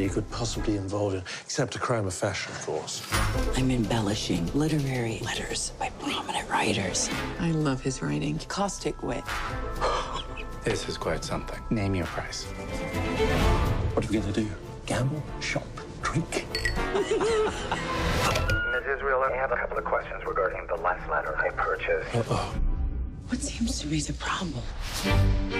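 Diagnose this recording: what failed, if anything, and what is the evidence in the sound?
The sound jumps ahead at 10.15, 15.26 and 22.55 s, dropping roughly 200, 150 and 100 ms: compressed frames skipped at decode, about 46.4 ms each.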